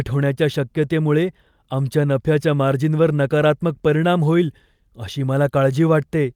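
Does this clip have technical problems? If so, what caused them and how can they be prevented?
No, nothing in this speech recording points to a technical fault, so there is nothing to trace back or prevent.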